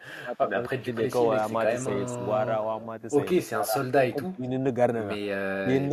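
From 0.22 to 0.9 s the speech drops in pieces, by as much as about 30 dB. This is likely speech suppressed in double talk. The echo canceller could not tell the talker from the far end's echo.

At 1.37 to 1.51 s a faint copy of the speech returns 262 ms late, about 30 dB down. It returns again at 2.67 to 2.82 s, fainter still. This is an echo leak, likely from a loudspeaker echo the canceller missed.

The suppression comes back at 3.43 to 3.75 s, 4.1 to 4.46 s and 5.63 to 5.68 s. Each dip is shallower, from about 25 dB to about 5 dB.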